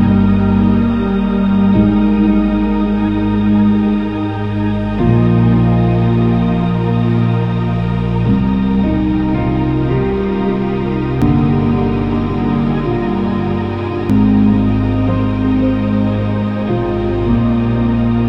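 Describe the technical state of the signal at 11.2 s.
At 11.22 s there's a brief burst of damaged data in the compressed stream, a single short event. Some of the encoded bytes there were wrong: lost, blanked or overwritten with something else. So the decoder couldn't make sense of those frames, lost its place, and had to hunt for the next valid frame header before it could carry on. You hear that as a quick chirp or squawk, a little blip in the sound.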